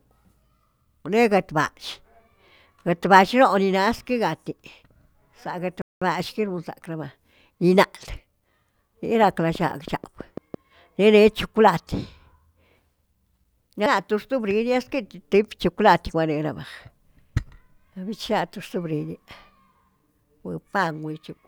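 A speech recording with two faults. At 5.82 s a playback stall cuts the sound to silence for about 0.2 s, until 6.02 s. The player likely ran short of data. From 9.23 to 10.55 s a train of clicks sits over the sound. About ten similar clicks tick at a regular 6.1 per second, peaking a little above the speech, likely from electrical interference.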